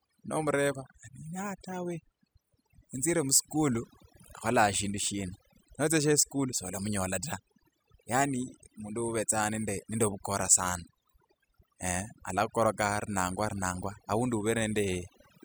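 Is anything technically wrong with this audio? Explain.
Yes. Throughout the speech there is overdone noise removal. The noise reducer pulls individual frequency bands down hard whenever they sit close to its noise estimate, taking quiet parts of the voice with them. The background drops and breaks up into twinkling specks.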